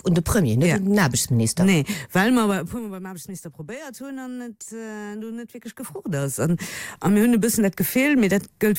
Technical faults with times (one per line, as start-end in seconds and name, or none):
5.67-6.59 zipper noise